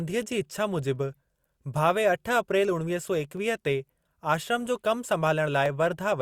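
At 3.37 s and again at 5.66 s the speech carries a single sharp click, a thin vertical line across the spectrum. These are likely dropped samples: a fraction of a millisecond goes missing and the waveform jumps. Unlike a dropout, no audible sound disappears.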